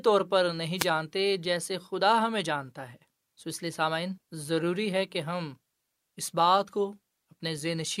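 At 0.76 to 0.88 s, a wireless microphone noise hit: the FM radio link fades as reflections cancel, and receiver noise rises into a brief static swish over the speech.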